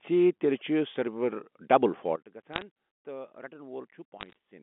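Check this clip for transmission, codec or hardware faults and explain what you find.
Two kinds of fault turn up in this telephone-band speech, which is carried over G.711 mu-law at 64 kbps, 200 Hz to 3.5 kHz.

A sudden gain jump hits at 2.16 s. Speech and background noise both drop by about 17 dB in one step and stay down to the end. The likely cause is a gain setting applied without a ramp.

Bit errors on a digital phone line appear from 2.54 to 2.62 s and from 4.20 to 4.33 s, at rates of roughly 0.5 and 0.4 percent. Flipped bits corrupt individual samples, and the result is bursts of sharp ticks and crackle over the speech.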